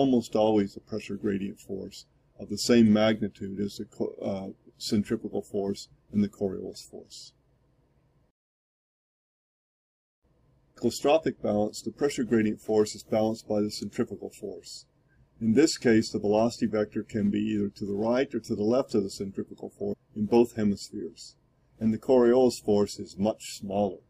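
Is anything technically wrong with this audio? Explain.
Yes. Damaged data in a compressed stream is audible four times: 2.84–2.86 s, 6.74–6.76 s, 10.73–10.77 s and 19.90–19.94 s. At each point, bytes in the encoded stream are corrupted, so the decoder misreads those frames, loses its place and hunts for the next valid frame header before resuming. Each event is a brief blip lasting roughly 20 to 45 ms, heard as a short, unnatural chirp or squawk that breaks into the sound.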